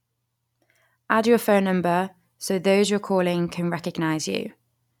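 A short speech recording, with no technical fault to report anywhere in it. Nothing in the audio calls for a time stamp, a cause or a fix.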